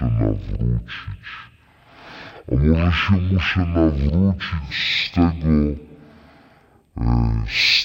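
A stereo-read-as-mono fault runs through the whole of this speech clip: the interleaved left and right samples have been read back one after another as if they were a single channel. Every stereo frame becomes two consecutive mono samples, so the recording plays at half speed, 0.5 times normal, and drops a full octave, 12 semitones, making the speech slow and deep. A fainter mirrored copy of the sound also shows up in the upper half of the spectrum.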